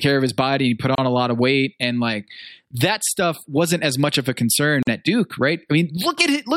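At 0.95 s, after "his body he put", the speech drops out for 29 ms and resumes at "a lot of weight"; at 4.83 s, after "much of a concern", a 45 ms hole opens. Both are gaps at joins of encoded pieces, where encoder start delay and end padding were left untrimmed.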